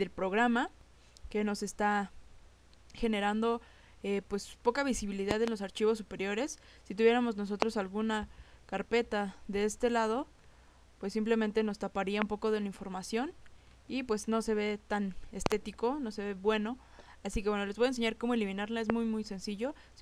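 A sudden voltage step, likely from a plug, switch, static or driver glitch, hits the signal five times. Each is a loud pop about 20 to 25 dB above the sound, which continues underneath. Double pops come at 5.31–5.50 s and 15.46–15.54 s, and single ones at 7.62–7.64 s, 12.22–12.24 s and 18.90–18.92 s.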